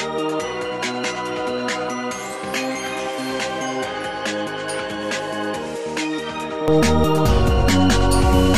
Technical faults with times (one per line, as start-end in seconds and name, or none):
0.00-6.68 input switched to a poorer device